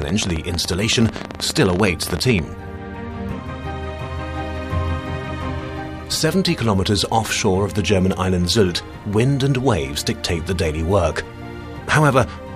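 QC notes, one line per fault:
0.02–2.40 s, train of clicks: a pulse source, likely interference from nearby equipment or a faulty connection, injects similar short spikes about 17 times per second at an uneven pace, roughly forty in all. They stand well above the sound, heard as irregular ticking and popping.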